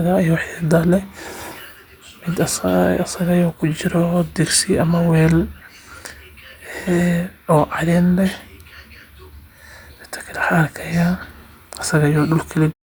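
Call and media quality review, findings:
Nothing to flag on this speech recording; the only change is an intentional-sounding fade out that begins around 12.5 s and finishes at 12.74 s, smooth and without any click at the tail.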